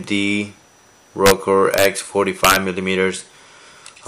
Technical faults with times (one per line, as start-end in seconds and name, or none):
1.26-1.31 integer overflow
1.74-1.85 integer overflow
2.44-2.56 integer overflow